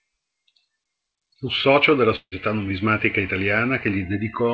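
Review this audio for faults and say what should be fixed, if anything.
At about 2.16 to 2.34 s the sound stalls: the last bit gets stretched into a fading buzzy tail, falls to near silence, then comes back with around 160 ms simply gone. That's the signature of a long network dropout, likely packets that never arrived, which the receiver covered with concealment before giving up. The G.722 band limit at 8 kHz applies throughout, as expected. A bigger jitter buffer, or FEC/redundancy on the link, would help ride out gaps like this.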